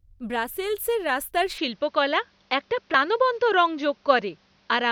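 A speech clip with an abrupt change in sound at 1.58 s, just after "ব্রাসেলসের রাস্তার". From there to the end, nothing reaches above 6.5 kHz. The tone turns duller, the level shifts modestly, and a faint new background noise appears. There is no gap at the change. The likely cause is an input switched to a poorer device.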